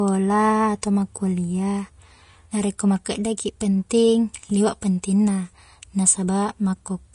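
From start to finish, the treble above 10.6 kHz is gone, and the high band that remains sounds hissy and grainy. Sibilants turn into rough noise. Consonant onsets are smeared rather than crisp. The damage is plainly audible throughout the speech. This is likely Vorbis compression at a low setting. The codec keeps a smooth spectral outline but quantises the fine treble detail so coarsely that it becomes noise. The degree of damage points to a bitrate around 34 kbps.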